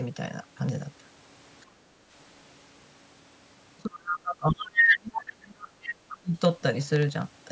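A speech recording carries periodic USB or driver dropouts from 0.69 to 7.41 s: about a hundred tiny silent gaps, each a fraction of a millisecond, every 64 ms. They tick only under signal and show as evenly spaced hairline vertical lines on a spectrogram. The background is gated by the echo canceller from 1.66 to 2.07 s, with the room tone dipping about 11 dB and appearing as a sudden darker band in the noise floor. Between 3.86 and 5.89 s, and again from 6.13 to 6.41 s, the talker's speech is pulled down as much as about 30 dB and 25 dB, likely speech suppressed in double talk. A second voice leaks through at 4.08–4.18 s (about 5 dB under the talker), 4.6–5.15 s (about 5 dB above) and 5.83–6.16 s (about 10 dB under). This is likely the other side's voice leaking through from the loudspeaker, and it shows as extra harmonic striations overlapping the main speech. Throughout, the spectrum stops at 8 kHz, which is consistent with the call path.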